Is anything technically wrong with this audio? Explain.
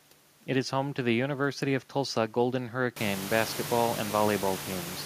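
No, nothing in this recording points to a technical fault.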